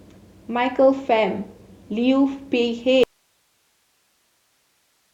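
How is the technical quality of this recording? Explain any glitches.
The recording has one clear fault. From 3.04 s to the end, an audio dropout to a faint residue occurs, likely a signal path that lost its source while the downstream chain stayed live. The speech cuts off abruptly, leaving only hiss around 45 dB below the speech level rather than a natural pause or fade.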